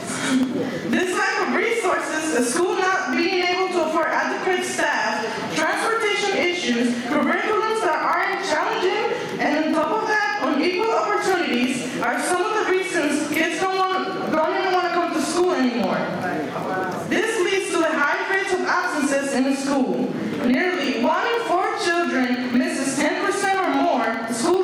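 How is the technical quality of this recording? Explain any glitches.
The recording has two technical problems running through it. Gain pumping runs throughout: the gain swings by roughly 15 dB as it is pulled down under loud sounds, likely from excessive gain driving a fast limiter. Periodic USB or driver dropouts run from 0.13 s to 24.54 s: every 0.1 s, about half a millisecond is replaced by silence as the bus stalls, producing a steady ticking under the signal.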